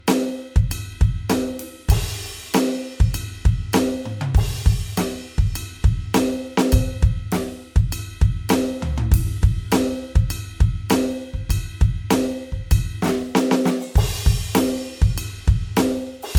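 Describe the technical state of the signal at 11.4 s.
At 11.4 s the music carries generation loss, present throughout. It is likely from about four rounds of MP3 encoding at 96 kbit/s, leaving swirly, hollow smearing and blurred attacks.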